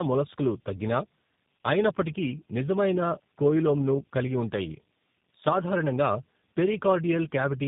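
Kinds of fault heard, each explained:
Tandem speech coding: the sound has passed through two low-rate speech coders in sequence, with the second re-encoding the first one's already damaged output. Throughout the clip the speech is rough, muffled and warbly, and nothing is present above about 3.8 kHz. The character fits a GSM full-rate leg feeding a G.729A leg through a G.711 link. The compounded loss of detail exceeds what either coder would cause alone.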